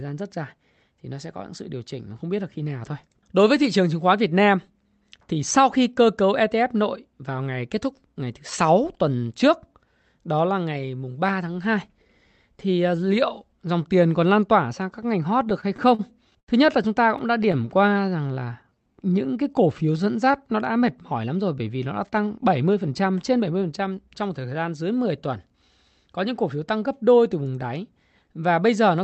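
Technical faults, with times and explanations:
15.23 to 16.50 s, repeated stalls (stutter): right after "tỏa sang các ngành" the speech keeps catching, about ten times in a little over a second. Packets are showing up late, so the jitter buffer runs dry and the receiver stretches the last sound to cover each gap. The longest is around 80 ms, and those fill-ins make up about 16% of the stretch. Nothing actually goes missing. It just drags and stutters until it reaches "nhất là chúng ta".
17.18 to 17.69 s, repeated stalls (stutter): just after "nhất là chúng ta" there's a second, lighter burst of about seven hiccups. None of the gaps is longer than about 17 ms, so they come across as a quick flutter more than as pauses. It's the same cause again, late packets leaving the buffer empty, with the last sound carried over until new audio shows up. About 15% of this half-second is covered that way, and again nothing is lost.
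17.78 to 20.37 s, jitter buffer slow-down: straight after the stutter the speech slows to about 88% of normal speed while the pitch stays where it was. The buffer has been drained and has to refill, so the receiver keeps repeating single pitch periods and slivers of pauses. That adds roughly 0.3 s over the stretch, which comes out as drawn-out syllables.
22.10 to 25.17 s, jitter buffer speed-up: from "bởi vì nó đã" onward it's the opposite, with the speech running at about 111% of normal speed and the pitch unchanged. Delayed packets probably arrived all together, leaving the buffer holding more audio than it wants. To get back to its target delay, the receiver trims out short pieces one or a few pitch periods long, again and again. That adds up to something like 0.4 s, which gives this stretch a hurried feel.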